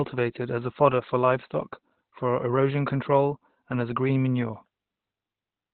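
From start to finish the speech sounds muffled and hoarse, boxed into a narrow telephone-like band with nothing above 4.4 kHz, and the codec damage is heavy. This is likely Opus compression running in its speech-oriented SILK mode: starved of bits, the encoder narrows the bandwidth and models the signal coarsely, and the dullness and hoarseness point to a rate of about 12 kbps.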